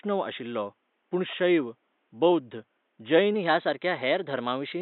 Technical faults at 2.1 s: MP2 compression

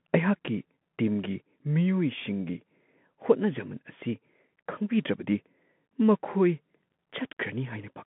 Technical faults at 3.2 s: Bluetooth CVSD headset codec

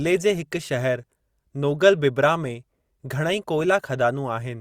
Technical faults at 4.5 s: none

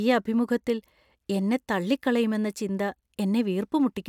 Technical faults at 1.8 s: none

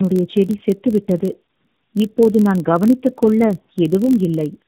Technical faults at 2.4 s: tandem speech coding; block size mismatch (padded)

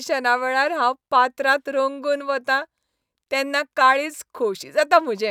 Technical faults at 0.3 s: none

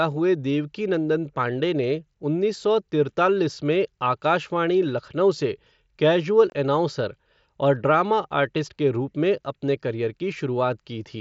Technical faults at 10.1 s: none

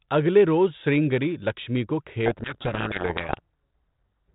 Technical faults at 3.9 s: codec payload misread

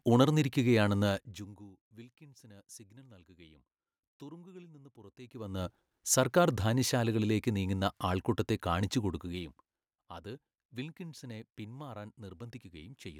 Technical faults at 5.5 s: zipper noise

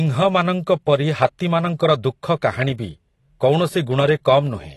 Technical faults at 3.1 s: AAC compression

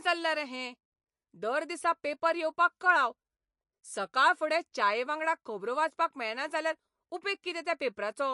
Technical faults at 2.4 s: MP3 compression

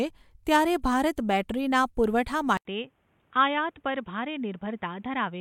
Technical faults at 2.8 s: input switched to a poorer device

